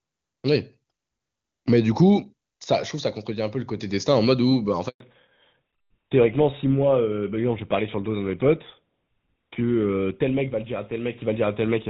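A network handover interrupts this speech recording at 4.88 s. While the phone moved the call from one network to the other, no speech frames got through, so the voice dies away almost at once and leaves a handover gap of 120 ms, lasting until 5.00 s, when the new link begins carrying audio. Whatever was said inside that gap is gone. Before the switch the sound is clean, wideband HD Voice that fits AMR-WB at its top rate of about 23.85 kbit/s, with little or no audible coding damage. From 5.00 s to the end, the call has fallen back to narrowband, with a character that points to GSM full rate at 13 kbit/s. Nothing remains above 4 kHz, so the upper range of the voice is cut away. The speech turns muffled and duller, with a rougher, grainier texture that contrasts with the crisper sound before the handover.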